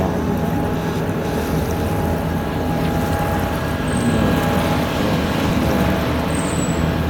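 The audio has two moments where chunks play out of order, at 0.75 to 1.25 s and 5.0 to 5.5 s. In each, a 250 ms chunk arrived one slot late, so two adjacent chunks swap places and the sound briefly scrambles across three hard joins. Unlike a dropout or a repeated buffer, nothing goes missing or plays twice; the same material is present, just jumbled.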